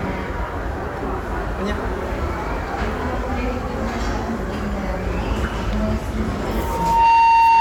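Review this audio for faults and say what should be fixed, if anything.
At 3.81 s there is a brief blip from damaged data in the compressed stream. Corrupted bytes at that point left the decoder unable to read a frame, so it lost sync and skipped ahead to the next valid frame header. On a waveform it shows as an abrupt discontinuity. On a spectrogram it appears as a thin vertical smear of broadband energy. Storing and transferring the file with checksums, or using a container with error detection and resynchronisation, would prevent this.

From 6.50 s to the end of the clip, a loudspeaker feedback squeal takes over. A microphone was picking up the loudspeaker it fed, and at 917 Hz the loop gain exceeded one, so that tone built on itself over roughly half a second until it sat about 10 dB above the surrounding sound. A spectrogram shows a single bright horizontal line at 917 Hz that thickens as it grows, and the waveform swells into a dense, steady oscillation. 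Lowering monitor gain, moving the microphone away from the speaker's axis, or notching 917 Hz would prevent it.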